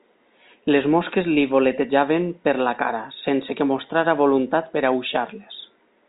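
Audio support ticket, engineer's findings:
Nothing to flag here: the speech sits in the telephone band, topping out around 3.8 kHz, which fits G.711 A-law telephone coding, and no fault turned up on listening.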